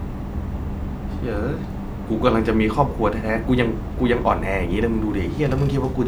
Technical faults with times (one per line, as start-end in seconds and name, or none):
none